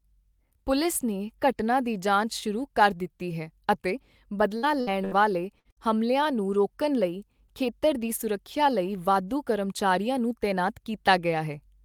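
Speech with five bursts of packet loss, at 4.57, 4.81, 5.05, 5.59 and 5.71 s, around "ਵਾਲੇ ਹਮਲਿਆਂ ਨੂੰ ਰੋਕਣ". Unlike a plain dropout to silence, each gap of about 53 to 67 ms holds the preceding sound as a fading buzz or hiss, then resumes with 60 ms skipped.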